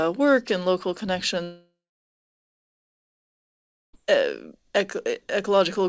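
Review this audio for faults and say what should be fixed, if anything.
Right after "work and local", the audio cuts out from 1.44 s to 3.95 s in a long network dropout. The receiver stretches the last sound into a fading buzz, then leaves about 2.2 s of near-silence. Roughly 2.5 s of content never comes back, and the likely cause is a burst of sustained packet loss on the G.722 call path, which is band-limited to 8 kHz. A more stable network link, plus forward error correction or redundant packets, should keep gaps like this from opening up.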